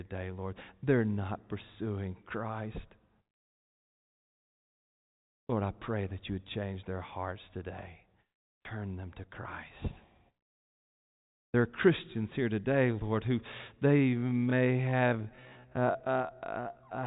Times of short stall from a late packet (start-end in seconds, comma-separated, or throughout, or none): none